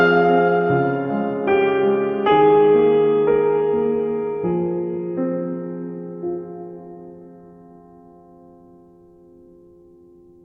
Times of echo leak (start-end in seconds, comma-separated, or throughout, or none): none